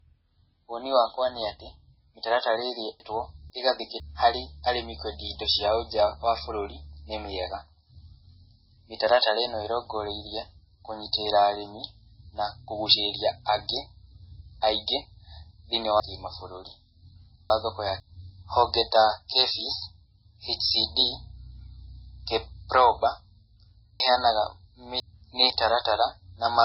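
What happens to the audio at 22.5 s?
Heavy, likely MP3 compression runs through the clip, including 22.5 s. Treble stops at 5.6 kHz. Weak frequency lines flicker, so the speech sounds watery.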